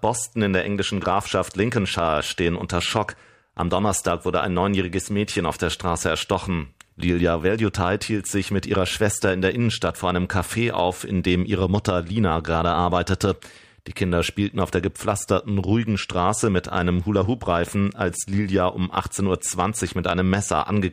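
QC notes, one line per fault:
Nothing to flag here, the speech comes through with no problems worth noting.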